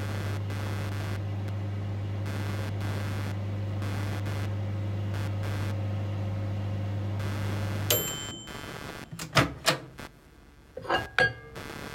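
An everyday sound recording carries computer activity noise from start to finish. A buzzing chirp pulses at around 150 times a second, only about 10 dB below the wanted sound. It tracks the machine's processing load, not the audio, as load swings disturb the shared ground.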